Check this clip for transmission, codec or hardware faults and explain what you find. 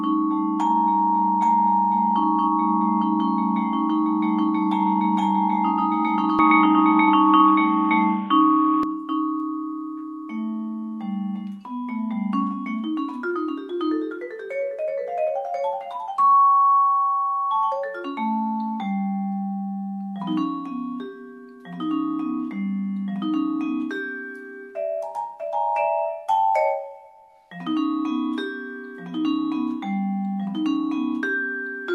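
One fault: from 6.39 to 8.83 s the input likely switched to a poorer device. Nothing above 3.8 kHz gets through, so the sound turns dull, shifts about 5 dB in level and picks up faint new background noise.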